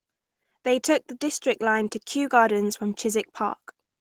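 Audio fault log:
throughout Opus compression: the codec was likely squeezed to a low bitrate near 16 kbps and into its hybrid mode, which codes the lower speech range with a speech-style model and fills the upper bands from folded or noise-like energy. The speech sounds plainly hoarse and rough, with grainy, hissy upper detail in place of clean overtones. Content extends to about 20.3 kHz, so the top end is present, but its texture is noisy rather than tonal.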